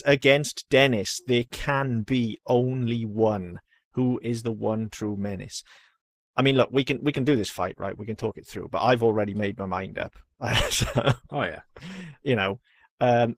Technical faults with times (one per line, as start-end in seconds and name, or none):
0.96-13.38 adaptive stream at a lower bitrate